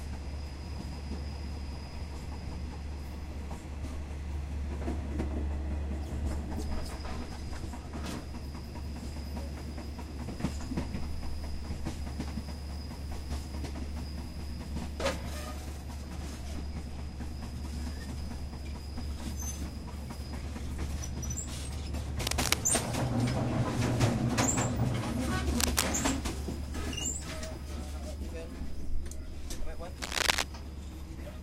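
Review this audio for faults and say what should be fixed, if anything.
Cable scratch noise, likely from a worn cable, connector or control carrying DC whose contact resistance jumped as it moved. It adds dense, uneven bursts of scratching over the sound at 22.24–22.54 s, 25.49–25.83 s and 29.96–30.44 s, about 5 dB above the sound in the first and third bursts and about level with it in the second. To prevent it, replace or clean the suspect cable, connector or control, and keep it still while recording.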